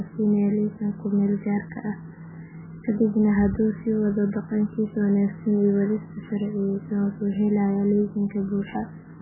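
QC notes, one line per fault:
throughout: MP3 compression, heavy. Nothing sounds above 2.9 kHz, so the speech is dull and muffled, with a watery, swirling texture as weak frequency lines drop in and out between frames. This likely comes from MP3 encoding at a bitrate near 8 kbps.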